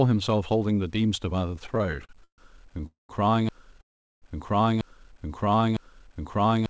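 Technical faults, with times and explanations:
Throughout: low bit depth without dither. Quiet passages and decaying sounds turn gritty, and the faintest parts sputter or drop out instead of fading smoothly. The grit fits plain truncation to roughly 9 bits, likely with the error left undithered, so the distortion follows the signal at around 40 dB below it. On a spectrogram the quiet stretches show a grainy, signal-shaped haze, and soft tails on the waveform appear stepped or blocky. The call codec's band limit is also visible as nothing above 8 kHz.
1.56 to 2.40 s: repeated stalls (stutter). The sound catches and drags in a rapid series of short holds, the longest about 0.14 s. Packets were arriving late again and again, so the jitter buffer kept running dry and the receiver stretched the last sound each time. About 0.32 s was filled in, roughly 38% of the span, and nothing is lost. The waveform shows repeated smeared, fading patches, and the spectrogram shows horizontally streaked, frozen spectra between bursts of fresh detail.
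2.86 to 3.11 s and 3.81 to 4.24 s: call audio freeze. The sound hangs briefly as a fading buzz and then goes quiet before resuming exactly where it stopped. The first freeze adds about 0.23 s, with about 0.15 s silent. The second adds about 0.41 s, with about 0.39 s silent. Delayed packets likely emptied the buffer, and the receiver padded the wait. On the waveform each freeze shows a decaying smear into a flat gap, and the spectrogram shows vertical blank bands.
3.49 s to the end: broken-record loop. From here a fragment of about 0.89 s repeats exactly, back to back, until the clip ends. The audio that should have followed is gone. The likely cause is a stalled player or stream that kept resending the last piece it held. On the waveform identical shapes recur at a fixed 0.89 s spacing, and the spectrogram shows the same pattern tiled repeatedly across time.
5.08 to 5.63 s: jitter buffer slow-down. 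The sound runs slower at unchanged pitch, at about 90% speed, with drawn-out segments. The buffer was rebuilding its reserve by repeating single pitch periods and slivers of pauses, adding about 63 ms in total. On the spectrogram, harmonics stay at the same frequencies but features stretch horizontally. The waveform shows near-identical cycles duplicated in runs.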